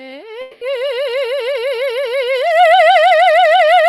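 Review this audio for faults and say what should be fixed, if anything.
From 0.41 to 0.63 s the music turns into a fading buzz, then resumes with about 200 ms skipped, likely a long network dropout. Waveform shows a decaying smear; spectrogram shows smeared harmonics below the 12 kHz ceiling of the Opus path. Adding redundancy such as forward error correction, or using a steadier network link, would prevent it.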